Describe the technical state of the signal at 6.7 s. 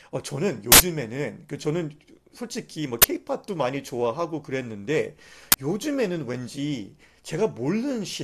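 The signal at 6.7 s is intact, with no fault audible at that point in the speech.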